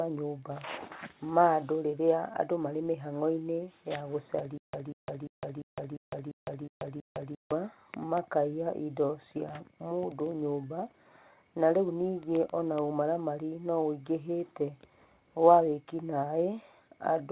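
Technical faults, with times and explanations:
4.58–7.52 s, stutter with silent gaps: a 190 ms burst repeats eight times, each followed by 158 ms of digital silence, every 347 ms. This is likely a stalled stream replaying its last fragment. The waveform shows identical blocks separated by flat silent stretches, and the spectrogram shows repeated patches with empty columns between them.
6.66–6.69 s, short concealed packet loss: about 20 ms of the G.711 call audio went missing, and 13 ms of it was filled by extending the preceding sound before blending back. It is heard as a brief smear. The spectrogram shows a short smoothed stretch, still capped at 4 kHz.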